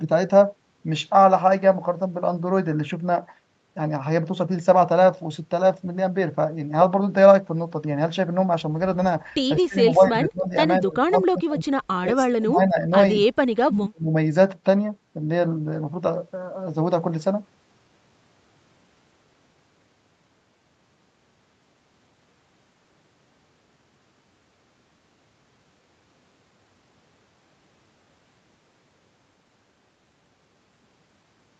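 The speech dips and chops out in pieces at 9.56–10.55 s, 10.80–11.68 s, 12.00–12.91 s and 13.51–14.13 s, from a dip of about 15 dB to about 35 dB. It is likely speech suppressed in double talk, with the echo canceller muting the talker while the far side spoke.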